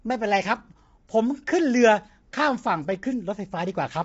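Throughout the speech, the sound is rough and grainy, with noise between the harmonics and nothing above 7.7 kHz. The likely cause is low-delay AAC compression (AAC-ELD), whose short frames resolve pitch poorly, here at what sounds like about 24 kbps.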